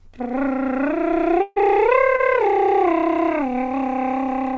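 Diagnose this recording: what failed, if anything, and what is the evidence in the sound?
Network stage, burst of packet loss. From 1.42 to 1.58 s the music freezes into a held, fading continuation of the last sound for about 140 ms. A brief dropout of about 10 ms follows. Then playback resumes further on, with that stretch of music gone.

Network stage, short concealed packet loss. At 2.16 to 2.20 s a 20 ms hole was patched by extending the preceding sound and blending back in. It is heard as a brief smear in the music. The band-limited call path, with nothing above 8 kHz, fits a G.722 codec.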